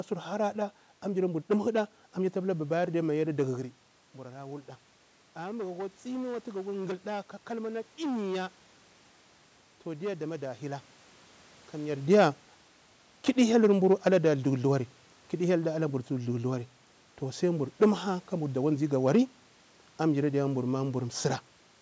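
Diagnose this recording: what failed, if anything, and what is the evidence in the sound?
Hard clipping runs through the whole recording: the speech arrives driven roughly 12 dB past full scale at a converter or sample-format stage, so a few percent of samples are sliced flat at the ceiling. The squared-off tops throw harsh harmonics up toward the 8 kHz band edge, giving a gritty crackle on every loud syllable. The level shifts near 3.5 s and 12 s are from the talker moving. A limiter or soft saturation would round peaks smoothly, and codec distortion would smear rather than crack.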